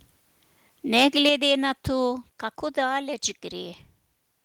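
It's a short speech clip, and between 0.95 and 1.29 s you can hear microphone overload: the loudest peaks get flattened against the converter's ceiling, roughly 5 dB too hot, so a small share of samples clip and give that crackly, harsh edge. The likely cause is simply the mic input set too high. Right at 1.3 s, just before "na to kako", the microphone volume steps down by about 5 dB, with voice and background dropping together. Then at 2.31 s, just after "na to", there's a second step down of about 3 dB. Both sound like the call software's likely automatic gain correction pulling the input level back after the clipping.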